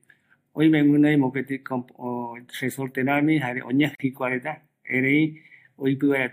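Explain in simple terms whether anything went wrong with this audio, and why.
Right after "resorte ramii jare", at 3.95 s, the speech drops out for about 44 milliseconds and then picks up exactly where it left off at 4.00 s. That's a gap at a join of encoded pieces. The audio was compressed in separate chunks and stuck back together without trimming, so the silence the encoder adds at the start of a chunk and the padding at the end stayed in. The compression smears the edges of the gap, so the fully silent part is shorter.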